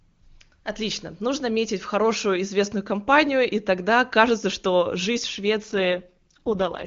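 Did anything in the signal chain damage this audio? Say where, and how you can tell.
Yes. From 5.63 s to 6.86 s the speech turns rough and raspy, with no gap and no loss of bandwidth. This is an AMR rate drop in the network stage: the AMR-WB codec sounds clear before this and then falls back to roughly its lowest rate, about 6.6 kbit/s, for this last stretch.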